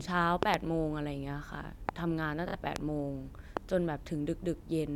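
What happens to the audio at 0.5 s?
Two sharp pops land in quick succession between 0.43 and 0.56 s, jumping far above the speech, about 20 dB louder than it, while the talking carries on underneath without a break. This is a loud pop, likely from a sudden voltage step or pulse such as a plug being seated, a switch, a static discharge or a driver glitch, which the downstream circuitry shaped into two brief, punchy transients.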